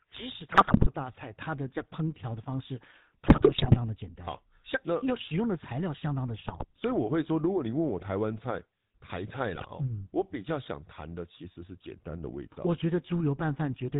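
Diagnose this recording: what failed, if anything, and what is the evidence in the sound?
The whole speech clip has passed through a GSM full-rate codec, which fits a 13 kbps phone link. The vocal tract is modelled and driven by sparse regular pulses, giving a buzzy, gravelly roughness. A spectrogram shows a hard ceiling with nothing above 4 kHz.

At four points, GSM bit errors on the network link corrupt the decoder's filter, pitch and gain values: 0.52–0.89 s, 3.26–3.77 s, 6.48–6.66 s and 9.56–9.67 s. The speech breaks into squawks, pops and gargling. The waveform shows sudden level spikes, and the spectrogram shows smeared, mis-shaped frames.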